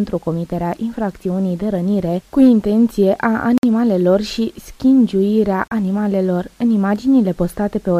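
At 3.58 s the sound drops to silence for about 54 ms, then resumes. At 5.68 s a shorter gap of about 36 ms follows. Both are likely a Bluetooth stall. Delayed packets left the headphones' buffer empty, so playback paused until resent data arrived.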